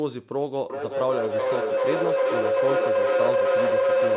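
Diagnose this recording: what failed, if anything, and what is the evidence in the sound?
From 0.7 s a tone around 500 Hz builds to about 5 dB over the speech, with a loop delay of roughly 400 ms: feedback howl, a microphone-to-loudspeaker loop on the call that gains on every trip.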